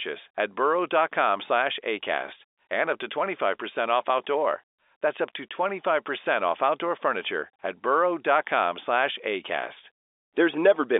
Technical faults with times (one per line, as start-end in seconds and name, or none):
none